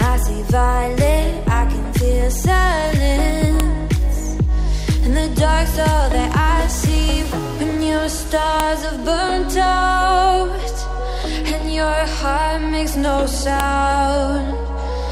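Separate pieces of audio, each about 5 s long, were joined without their WAV headers being stripped, so each piece's header bytes play as audio. This is file header played as audio, heard as a sharp, loud click at 3.60 s, 8.60 s and 13.60 s. Each click comes at the start of a new piece, regardless of what the sound is doing at that moment. The regular 5 s spacing fits a stream built from fixed-length chunks.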